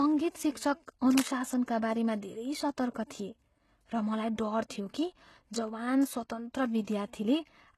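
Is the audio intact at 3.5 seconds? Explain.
No. At 3.5 seconds, as throughout, the treble is plainly metallic and artificial and stops at 12.3 kHz. The likely cause is HE-AAC compression at a low bitrate around 16 kbps, whose upper band is rebuilt from copied lower bands rather than coded.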